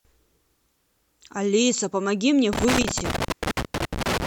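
From 2.53 s to the end of the clip, the speech is broken by loose connector crackle. A worn or dirty contact is making and breaking as it moves. Each break chops the signal, and any DC on the line adds pops. It sounds like irregular scratching and crackle.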